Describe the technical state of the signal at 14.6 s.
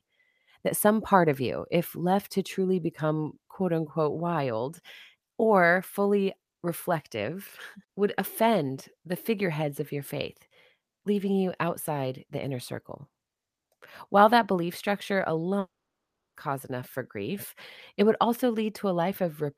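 At 14.6 s the speech signal is intact, with no dropout, distortion, glitch or other fault to be heard at that point.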